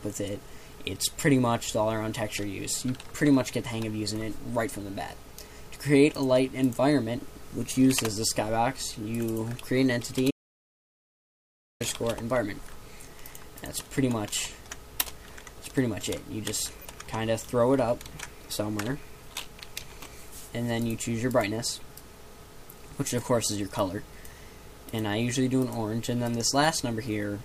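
The audio drops out completely from 10.31 s to 11.80 s, about 1.5 s of pure silence with no room tone. This is likely an audio dropout to silence, from a lost input. At 16.76 s to 16.85 s a brief glitch appears. That points to a corrupt frame decoded, with a few damaged compressed frames misplacing energy across frequencies.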